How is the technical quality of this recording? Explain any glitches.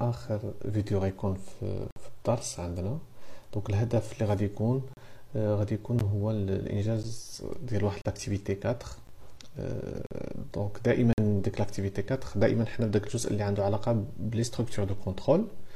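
The recording has a clear, repeating glitch: gaps between stream segments. Short hard-edged silences land at 1.91–1.96, 4.93–4.97, 6.0, 7.03, 8.02–8.05, 9.07, 10.07–10.11 and 11.13–11.18 s, each 10 to 55 ms. Their roughly one-second spacing fits one-second segments whose time stamps don't quite meet, so the player pads each join with silence. Nothing is lost; the audio just pauses briefly.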